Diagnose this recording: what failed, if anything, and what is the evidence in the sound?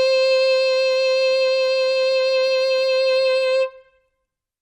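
Nothing failed here; the music comes across as intact, with nothing in the sound pointing to trouble at any stage between the source and playback.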